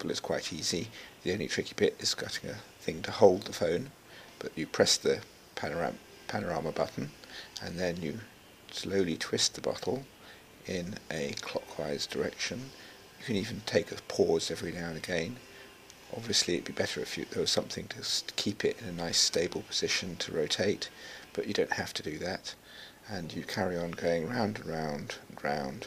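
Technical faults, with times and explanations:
No technical faults, with times or otherwise, can be heard in this clip.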